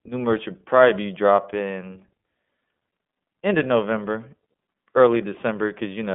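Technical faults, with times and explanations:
Throughout, iLBC codec: the speech is confined to a telephone band of roughly 200 Hz to 3.4 kHz, with nothing above 3.6 kHz, and has a plainly rough, synthetic edge from coding each 30 ms frame independently, which fits the 13.33 kbps mode.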